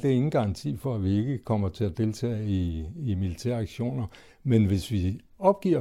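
No technical faults can be heard anywhere in this recording.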